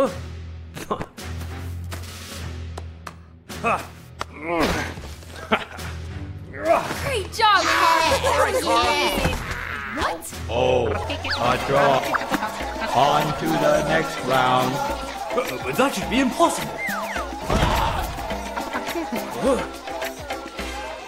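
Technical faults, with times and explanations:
11.04 s, overlap between stream segments: there's a tiny skip here, where about 6 ms of sound just goes missing and the waveform jumps straight from one value to another. That points to a segment join where two chunks claimed overlapping time stamps, and the player trimmed the supposed duplicate even though that stretch was never actually doubled. The abrupt discontinuity left behind is what reads as the skip.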